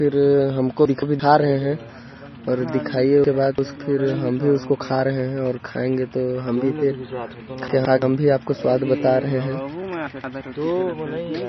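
It's a speech recording with two separate problems. The whole thing sounds thin and watery, with nothing above about 5.9 kHz and a swirly, chirpy edge on the sibilants. That's heavy MP3 compression, likely from a very low bitrate around 24 kbps, where the encoder chops off the top end and lets weak frequency lines flicker on and off. Then there are chunks out of order at 0.85 to 1.2 s, 3.24 to 3.76 s, 7.68 to 8.02 s and 10.07 to 10.41 s. Each one is a jumbled stumble where a roughly 170 ms block plays after audio that should have come after it. The 3.24 s one is longer because that block arrives two blocks late.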